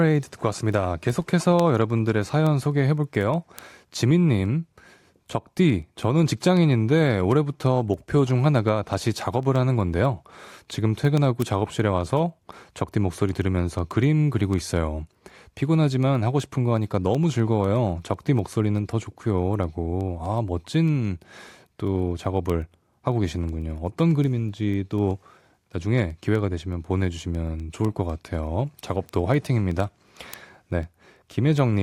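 From 0.10 s right through to 31.70 s the speech carries word clock ticks, a steady rattle of sharp clicks at roughly one every 0.15 s, a few hundred in all, some louder than others. That's a digital link being read by a receiver on its own clock rather than locked to the sender. Each time the two clocks slip past each other a sample gets dropped or doubled, and the tick rate points to a clock mismatch somewhere around 150 ppm.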